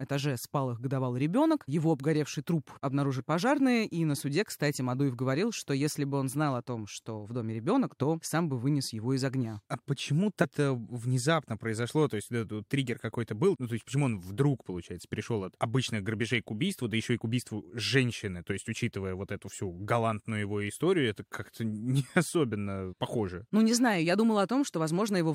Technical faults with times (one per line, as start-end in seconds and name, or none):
10.43-10.45 damaged data in a compressed stream